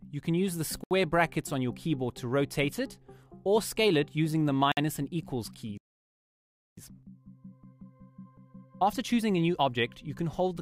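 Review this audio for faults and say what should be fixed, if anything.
The sound drops briefly to silence twice, from 0.84 to 0.91 s (72 ms) and from 4.72 to 4.77 s (53 ms), then carries on. These short gaps are likely a Bluetooth stall: radio interference delayed packets, the headphones' small buffer emptied, and playback paused until the retransmitted packets arrived. A larger receive buffer, or moving the link away from crowded 2.4 GHz traffic, would keep the headphones fed through such delays.

From 5.78 to 6.77 s the audio cuts out for about one second in mid-flow before it resumes. A gap this long points to a playback stall, likely because the player ran out of data or its audio thread was blocked and nothing reached the output until it recovered. Running audio on a high-priority thread with enough data buffered ahead would stop the output from starving.

Immediately after that gap, from 6.77 to 9.77 s, the audio plays hurried at 1.25 times normal speed while its pitch stays unchanged. 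This is time-compressed catch-up. To work off the backlog built up during the stall, the player cuts out small pieces of audio and cross-fades across the joins, so three seconds of playback carry close to four seconds of material. If the underlying stalls are prevented, there is no backlog to recover and this rushed section goes away.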